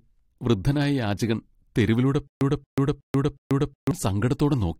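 Right after "വൃദ്ധനായ യാചകൻ തെരുവിലൂടെ", from 2.27 to 3.91 s, there's a stutter with silent gaps: a 228 ms burst repeats four times, each followed by about 137 ms of dead silence, every 366 ms. It's likely a stalled stream replaying its last buffer, and the speech meant for that stretch is gone.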